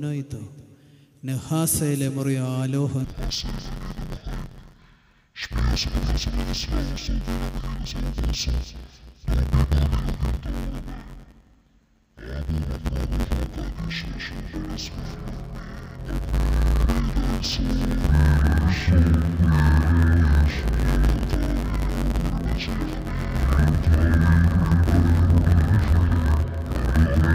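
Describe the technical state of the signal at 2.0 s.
At 2.0 s the signal is intact, with no audible fault at that moment.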